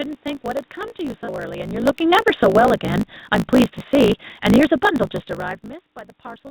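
Throughout the speech runs about 1.16 times fast at near-normal pitch, with a steady 54.4 Hz buzz underneath. This is a block size mismatch (truncated): each block is cut short before the next stage reads it, which fits 1024-sample writes. Unlike resampling, pitch stays put while timing hurries.

At 1.24 to 1.29 s, 1.36 to 1.40 s and 2.10 to 2.14 s there is short concealed packet loss, the first gap about 40 ms and the others about 20 ms. Each sounds like a brief smear or wobble where the decoder stretched the preceding sound over the hole. The sound is otherwise continuous, which separates these from hard dropouts or clicks.

From 1.71 to 2.64 s the level sinks by about 8 dB as the automatic gain falls. The room noise drops along with the speech, so this is gain control, not the movement of the talker near 1.5 s, which changes only the voice level.

Overlapping that, from 2.57 to 2.95 s, the automatic gain rises by about 4 dB, and speech and background swell together over a fraction of a second. 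A talker leaning closer would lift the voice but leave the background where it was.

From 3.20 to 5.55 s the automatic gain falls again, by about 5 dB, as a slow, even sag in which the background dips with the speech. This differs from the talker's movement around 5.0 s, which alters only the voice. Throughout, the G.711 call path leaves nothing above 4 kHz.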